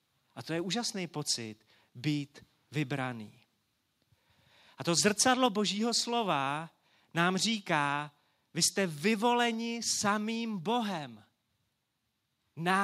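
At 5.46 s the speech and the background behind it drop together in a single step, about 3 dB quieter, and at 9.54 s a second step takes them down by about 2 dB more. Neither drop recovers. This is most likely the microphone volume stepped down: the call software judged the input too hot and lowered the device's input gain in one move each time.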